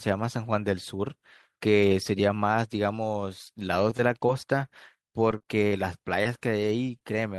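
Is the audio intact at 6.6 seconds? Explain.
No. At 6.63 s a lost packet was rebuilt from error correction: the decoder played a low-bitrate copy carried in the next packet, filling 10 ms without a gap. The waveform stays continuous, but a spectrogram shows a brief, rougher, noisier smear there.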